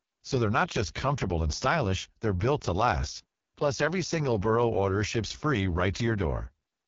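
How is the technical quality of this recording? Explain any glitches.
Pretty rough, honestly. The whole thing runs through an AMR wideband (HD Voice) codec, and a heavily squeezed one at that. Nothing reaches above about 7.3 kHz, and the speech has that raspy, gravelly edge you get when the codec is starved, which points to the lowest AMR-WB mode, around 6.6 kbit/s. At that rate the pulse-based vocal tract model can't track the voice closely, so the core band sounds coarse, while the top sliver up near 7 kHz is just shaped noise standing in for real detail.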